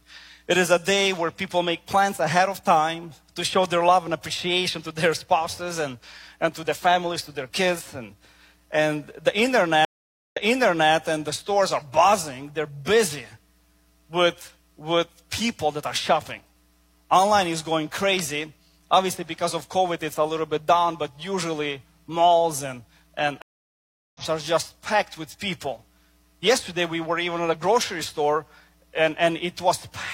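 Stream reconnects occur at 9.85–10.93 s and 23.42–24.22 s. Each time the connection dropped, the sound cut out, and a fresh decoder restarted mid-stream. The first gap lasts 0.47 s and resumes 0.6 s earlier, replaying material. The second lasts 0.73 s and picks up roughly 0.4 s later, skipping ahead.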